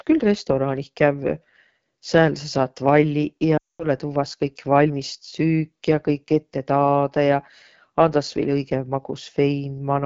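From start to end, the speech carries AMR wideband (HD Voice) codec damage. The codec models the voice up to 6.4 kHz with a pulse-driven vocal tract and fills the top band with shaped noise. The harsh, raspy texture points to one of its lowest rates, around 8.85 kbit/s.

From 3.57 to 3.87 s there are lost AMR speech frames. Radio errors corrupted a run of frames. The decoder reused its last good pitch and vocal tract settings at falling gain. The sound smears briefly, fades fast to silence, then returns weak or rough.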